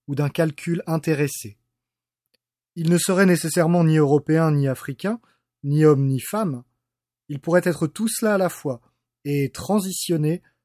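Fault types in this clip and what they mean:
No technical faults are audible anywhere in this recording.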